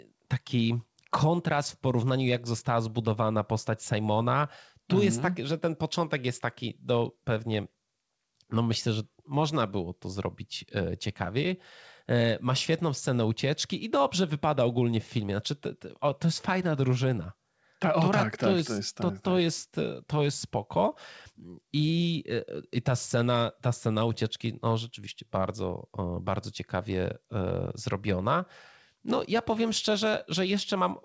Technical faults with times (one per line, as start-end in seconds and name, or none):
none